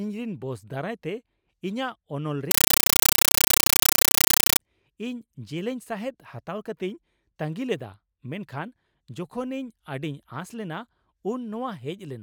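Speech is replaced from 2.51 to 4.59 s by a compressed stream played as audio: an undecoded AC-3 bitstream fed straight out as samples, heard as loud static chattering in 8 ms bursts 31.25 times a second. That fixed frame rhythm, rather than random crackle, separates it from ordinary digital noise.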